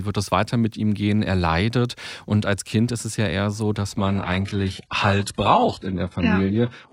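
An adaptive stream at a lower bitrate takes over at 3.98 s, after "ja eher so dass", and runs to the end. The player switched without a gap to a leaner encoding. Nothing remains above 11.5 kHz, the treble turns synthetic and artefacts thicken, which fits a 12 kbit/s HE-AAC stream.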